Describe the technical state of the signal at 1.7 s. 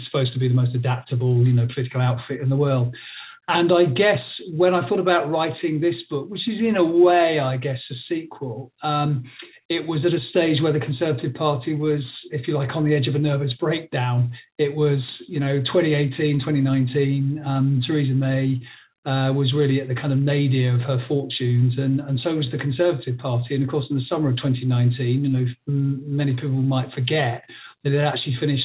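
At 1.7 s the audio is intact, with no fault, only the narrow band of the call path, which carries nothing above 4 kHz.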